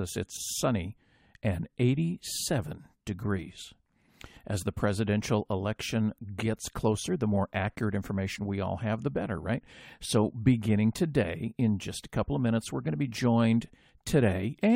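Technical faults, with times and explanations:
No technical faults found in this speech recording.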